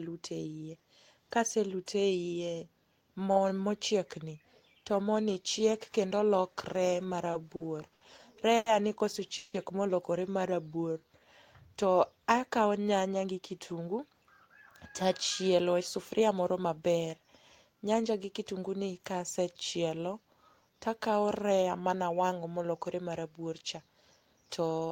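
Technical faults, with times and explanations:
7.31–8.68 s, repeated stalls (stutter): after "ni chiek kendo lokre", four brief gaps (longest 90 ms) are filled with continued sound, smeared repeated frames on a spectrogram.
9.38–9.56 s, call audio freeze: a 160 ms buzzy continuation fades without silence, likely from a late packet burst; spectrogram shows flat, stretched harmonics.
10.69–11.26 s, jitter buffer slow-down: repeated pitch periods add 92 ms, sound plays at 86% speed before "to akawo", waveform cycles visibly duplicated.
13.07–16.36 s, jitter buffer speed-up: after "to akawo", roughly 200 ms of pitch periods are cut, playing at 107% speed; waveform shows whole cycles removed, each remaining cycle unchanged in length.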